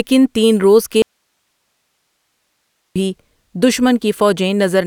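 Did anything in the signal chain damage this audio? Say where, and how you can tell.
Yes. The speech cuts out abruptly at 1.02 s, just after "تین روز", and returns at 2.96 s. That is an audio dropout to a faint residue, lasting about 1.9 s. The gap holds only hiss, roughly 55 dB below the speech. The hiss shows that everything after the break stayed live. The cause is likely an intermittent analogue connection ahead of the preamp, such as a cable or connector briefly losing contact. A pause or fade would not switch off this cleanly.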